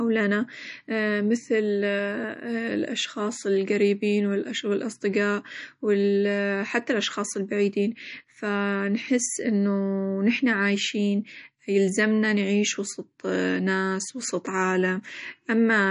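Throughout the speech, treble stops sharply near 10.6 kHz and weak detail flickers watery; unlike a plain low-pass, that swirl marks likely MP3 compression at roughly 40 kbps.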